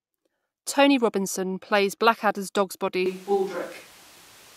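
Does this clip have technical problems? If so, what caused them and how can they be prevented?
Yes. From 3.06 s to the end, the speech turns abruptly roomy and thin, with room noise about 25 dB below it. This is likely a switch to a distant microphone. Monitor the close mic and record a backup.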